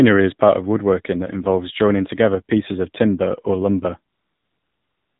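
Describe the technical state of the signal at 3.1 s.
At 3.1 s the speech carries AMR narrowband mobile codec damage, present across the whole clip. Running at 7.4 kbps, the vocal-tract model rebuilds each 20 ms frame from sparse pulses, so nothing above 4 kHz survives and the voice sounds plainly buzzy and synthetic.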